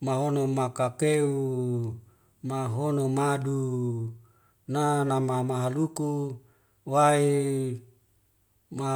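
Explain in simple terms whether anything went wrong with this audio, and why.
Listening to the recording, nothing stood out as having gone wrong.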